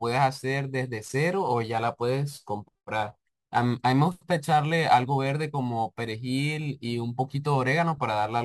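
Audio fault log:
Throughout: crude rate conversion. The speech carries a gritty, inharmonic fizz that rides on louder and brighter sounds. The pattern fits a change from 44.1 kHz to 48 kHz done by simply repeating the nearest sample, with no filtering. The timing errors recur in a fixed cycle set by the two rates. They create tones unrelated to the speech. This error sits roughly 30 dB below the signal, so it is audible but not dominant.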